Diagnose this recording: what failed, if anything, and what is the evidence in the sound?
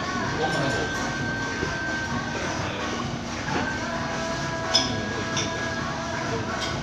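The codec stage likely failed, with MP2 compression at too low a bitrate, consistent with roughly 80 kbps, for the whole clip. Upper sub-bands are switched off, leaving nothing above 12.2 kHz, and the surviving bands are coarsely quantised, so the sound is dull, gurgling and granular.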